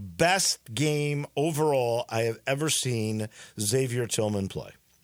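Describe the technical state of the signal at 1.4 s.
The signal at 1.4 s is intact, with the speech carrying through without any audible fault at that point.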